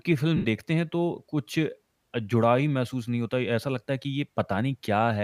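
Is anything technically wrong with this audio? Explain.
Yes. From 0.37 to 0.46 s, lost LE Audio frames cut out roughly 83 ms of speech, which fits eleven 7.5 ms LC3 frames. The decoder filled the gap by repeating the last spectrum with randomised signs, fading it after the first few frames, so the speech smears into a brief, decaying noisy blur.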